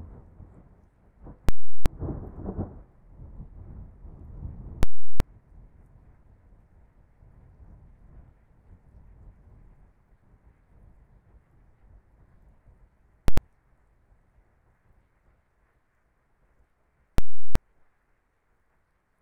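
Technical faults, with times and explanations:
1.49–1.86 s, 4.83–5.20 s and 17.18–17.55 s, invalid numbers at full scale: a very loud pop opens and closes each 0.37 s gap of dead silence, as invalid values were pinned to maximum output, which fits a 16384-sample block.
13.28–13.38 s, invalid numbers at full scale: a single hard bang where a shorter 0.09 s block, which fits 4096 samples, was forced to full scale, so its start and end pops merge.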